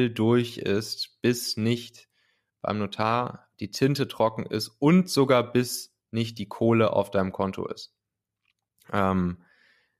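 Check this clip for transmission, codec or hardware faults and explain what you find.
Nothing wrong turns up here: the speech comes across steady and intact, with no transmission, codec or hardware trouble to point to.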